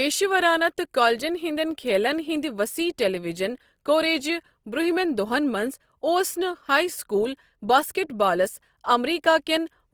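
It's a speech clip with Opus compression audible all the way through, likely from a low-rate encode, around 24 kbps by the sound of it. The band-filling of its music mode leaves the tones noisy, rough and grainy, with nothing above 20.3 kHz.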